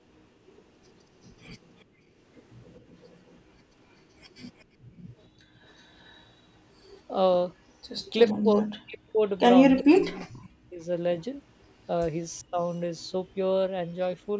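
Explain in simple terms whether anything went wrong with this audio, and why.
A couple of things went wrong. There's an echo leak: a delayed copy of the speech, trailing about 0.38 s behind, at 1.64–1.83, 2.74–3.39, 4.3–4.64, 5.79–6.26, 9.78–10.43 and 12.99–13.05 s. It's likely a loudspeaker echo the other end's canceller missed.

There's also speech suppressed in double talk: from 8.43 to 10.87 s and again at 12.42–12.59 s the voice drops away in pieces, likely because both sides were talking at once.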